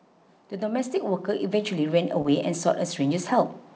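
From 0.58 s to about 2.72 s there's automatic gain rising. The AGC decided the input was too quiet and kept turning it up, about 7 dB in all, so the speech and the room tone behind it swell together over roughly two seconds.

Right near the end of that swell, at 2.22 to 2.29 s, there's a short concealed packet loss. About 20 ms never arrived in time, and the receiver papered over it by extending the preceding sound for around 26 ms before blending back in, trimming about 7 ms along the way. You hear it as a quick smear or wobble rather than a gap. Throughout, the band stops at 8 kHz, which fits a wideband call codec like G.722.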